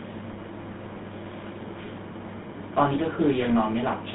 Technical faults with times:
0.00-4.14 GSM full-rate codec

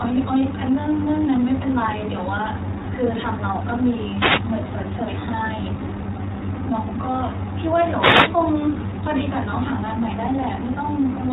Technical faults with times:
0.00-11.32 iLBC codec
4.10-4.50 wireless microphone noise hit
7.92-8.38 wireless microphone noise hit

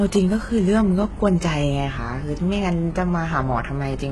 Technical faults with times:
0.00-4.11 HE-AAC compression

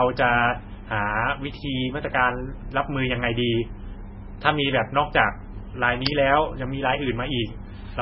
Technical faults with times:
0.00-8.01 MP3 compression

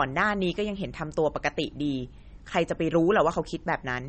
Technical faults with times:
0.00-4.09 MP3 compression

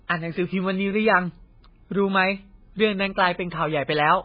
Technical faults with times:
0.00-4.25 MP3 compression

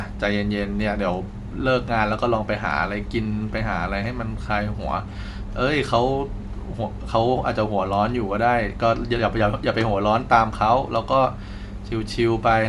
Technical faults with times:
0.00-12.68 Bluetooth LC3 compression

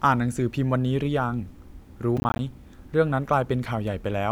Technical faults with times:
2.17-2.39 processor overload crackle

